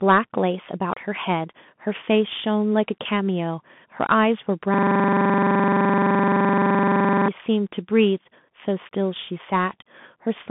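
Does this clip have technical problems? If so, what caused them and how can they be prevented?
Yes. Throughout, the audio went through a Bluetooth CVSD headset codec, a one-bit up-or-down coder with adaptive step size, which fits a 64 kbps link. The band runs roughly 150 Hz to 3.5 kHz with nothing above 3.8 kHz, leaving clearly audible damage: scratchy s sounds and granular hiss beneath the speech. Prevent this by using a wideband or higher-quality Bluetooth profile, or a wired microphone.

From 4.74 to 7.28 s, a system hang loop occurs. The computer or driver stalled while the sound hardware kept replaying its ring buffer, so one 42.67 ms piece, which fits a 2048-sample buffer, repeats about sixty times and sounds like a rattling stutter at 23.4 Hz. Prevent it by fixing the driver or system stall and by having the audio stack output silence when the buffer isn't refilled.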